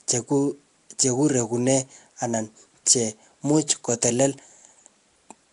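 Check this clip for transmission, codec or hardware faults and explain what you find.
There's one fault, present the whole way through the speech. It's likely Nellymoser compression: a rough, hissy halo and smeared underwater quality, with nothing above 10.7 kHz, which fits a coarse two-bit-per-sample Flash codec around 44 kbps filling starved bands with noise.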